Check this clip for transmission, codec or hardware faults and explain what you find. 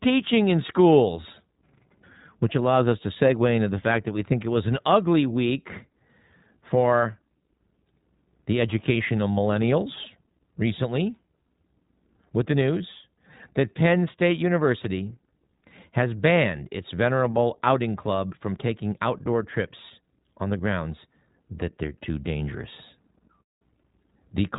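There's one fault, and it runs the whole clip: the speech has gone through the iLBC codec. Nothing gets through above about 3.8 kHz, so it has that boxed-in narrowband phone sound. Each short frame's excitation is coded on its own, without borrowing from the frame before, and at this rate that leaves the speech clear but plainly rough and a bit synthetic. The texture fits the 15.2 kbps mode with 20 ms frames.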